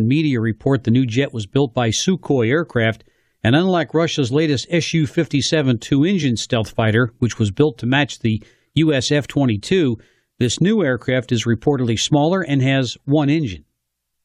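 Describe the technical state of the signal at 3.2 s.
At 3.2 s the speech signal is intact, with no dropout, distortion or other fault audible at that point.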